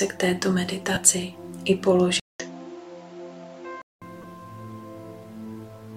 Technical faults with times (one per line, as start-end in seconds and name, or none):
0.94-0.97 lost LE Audio frames
2.20-4.02 input switched to a poorer device
4.22-4.24 lost LE Audio frames